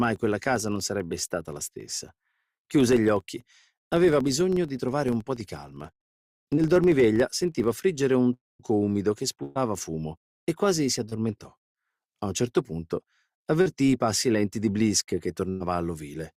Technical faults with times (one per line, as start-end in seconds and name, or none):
0.00-7.84 filter restarted on every block
1.07-1.12 short concealed packet loss
6.56-6.59 short concealed packet loss
8.33-8.61 long network dropout
9.43-9.57 burst of packet loss
11.09-11.13 short concealed packet loss
13.61-13.67 short concealed packet loss
15.49-15.67 burst of packet loss